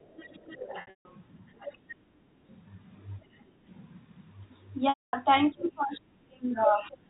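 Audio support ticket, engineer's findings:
Other side's voice leaking through: faint second voice at 0.02–1.32 s, 1.55–1.77 s and 6.81–6.96 s, roughly 20, 15 and 25 dB below the talker. Likely residual echo: loudspeaker playback reaching the mic, not fully cancelled by the AEC.

Packet loss with pitch repetition: buzzy, held tone then brief silence at 0.81–1.05 s (210 ms lost over 240 ms, longest gap 150 ms) and 4.89–5.13 s (240 ms lost). Concealment repeats the last pitch period and fades it. Gap sizes fit 30 ms packets.

Background gated by the echo canceller: room tone dips at 2.02–2.42 s (about 13 dB, roughly 0.3 s affected) and 3.48–3.64 s (about 11 dB, about 0.15 s). The AEC's suppressor clamps the mic while far-end audio plays, then releases.

Speech suppressed in double talk: near-end talker dips and drops out in pieces from 5.52 to 7.04 s, around 35 dB at worst, about 1.5 s affected in total. 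Likely AEC double-talk failure: both ends active, the canceller can't separate talker from echo and attenuates everything. G.711 mu-law path audible as 4 kHz band-limiting, with coding noise faint at most.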